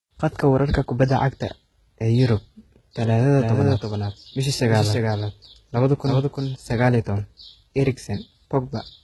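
Speech runs through the whole clip with heavy codec damage. The treble is synthetic, sibilants sound gritty and metallic, and nothing reaches above 11.8 kHz. That points to HE-AAC compression at a low rate, which fits about 16 kbps, with spectral band replication likely rebuilding the treble from copied lower bands. From 3.40 to 6.56 s, just before "saqal iyo tawan", a doubled audio track appears. A second full-band copy trails the original by around 300 ms at about 5 dB lower, with no reverberant tail, and it cuts in and out abruptly. This is likely a second capture path or an edit leaving two copies out of step.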